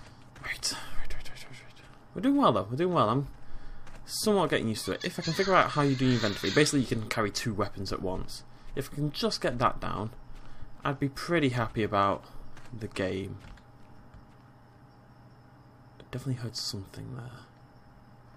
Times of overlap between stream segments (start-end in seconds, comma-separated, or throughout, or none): 16.37